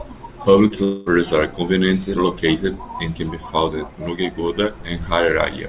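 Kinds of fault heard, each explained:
Short concealed packet loss: about 20 ms of audio failed to reach the decoder in time near 0.68 s, and the receiver covered the gap by extending the preceding sound for roughly 16 ms before easing back into the real signal. It comes across as a brief smear or wobble lasting under four hundredths of a second, within audio that has nothing above 4 kHz, which fits a G.711 narrowband call path.
Long network dropout: likely a stretch of about 220 ms during which no packets arrived, from about 0.84 s to 1.08 s, so that part of the speech was never played. The receiver filled the entire gap with a synthetic continuation of the last sound, heard as a fading buzz or hiss rather than silence. The real speech resumes just before "are conveniently located and", with whatever was said in between gone.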